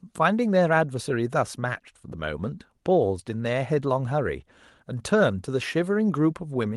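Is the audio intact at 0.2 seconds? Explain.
Yes, the speech at 0.2 s is intact, with nothing more than the ordinary coding character of the WebRTC call path it passed through.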